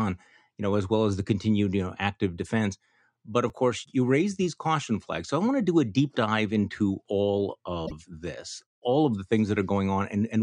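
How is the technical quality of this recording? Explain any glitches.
Two glitches are present in this speech recording.

At 3.50 s, just before "course you raise these", the audio jumps ahead, likely from a dropped buffer (overrun): a few milliseconds of unread samples were overwritten and the two sides joined without a gap.

From 7.83 to 7.92 s, between "deep dive into all" and "this all of the", damaged data in the compressed stream made the decoder lose frame sync, producing a brief disturbance.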